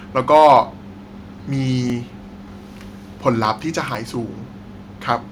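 From 0.33 to 0.58 s the speech sounds harsh and crackly. This is microphone overload. The loudest syllables drive the signal about 4 dB past the converter's ceiling. Around one sample in twenty gets its top sliced flat. Those flattened peaks add a gritty, distorted edge. The likely cause is an input gain set too high.

Four short jumps follow, at 1.05, 1.90, 2.75 and 3.95 s. Each is a dropped buffer, likely from an overrun. The program fell behind and the hardware overwrote samples before they were read. The first three each lose around 10 ms. The last loses about 20 ms. No gap of silence is left. The surrounding audio is spliced straight together. Each splice gives a sudden skip forward in the sound.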